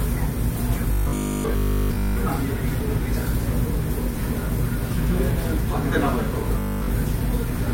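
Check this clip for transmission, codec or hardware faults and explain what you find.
There's one fault here, and it shows up twice: robotic sound from repeated short buffers, at 0.92–2.18 s and again at 6.59–6.91 s. Both turn the sound into a rigid metallic buzz at 50 Hz. The likely cause is a 20 ms chunk being replayed while fresh audio fails to arrive. The first stretch is repeated all the way through, and the second mostly.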